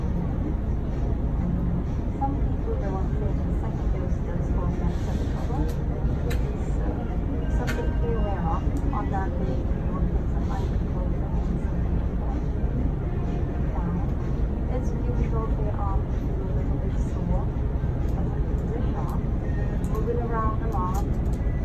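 No technical faults are audible anywhere in the recording.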